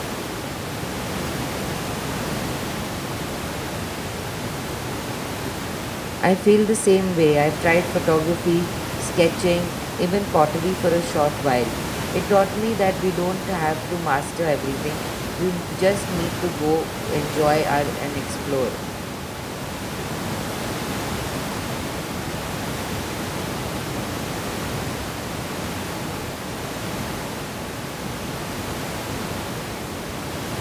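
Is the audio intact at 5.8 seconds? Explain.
Yes, the audio is intact at 5.8 seconds, with only the room's background noise, sitting about 10 dB below the speech, audible as part of the recording.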